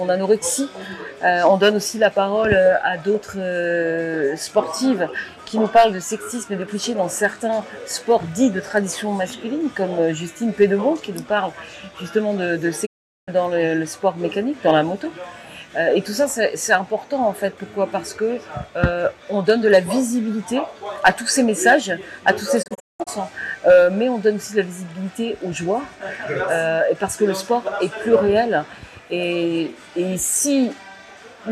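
At 12.85 s the sound fades out over about 20 ms and stays silent until 13.29 s. This is a digital broadcast dropout. The receiver lost good frames and muted, so about 0.41 s of programme is simply missing. At 22.61 s a second dropout breaks up into several short holes across about 0.43 s, ending at 23.09 s. The longest hole lasts 0.19 s. Together the holes remove roughly 0.29 s, which fits a dozen failed frames.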